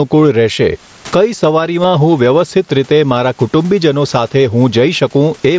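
Gain pumping runs through the whole clip: the level swings by around 15 dB. The waveform looks flattened and evenly dense. The likely cause is excessive input gain driving a fast limiter.

At 1.83 s, between "રહેશે કઈ" and "હું વ્યવસ્થિત રીતે મારા", there is concealed Bluetooth headset packet loss. About 15 ms went missing, which fits two lost frames. The receiver filled the gap by repeating recent waveform, visible as a short repeated stripe pattern.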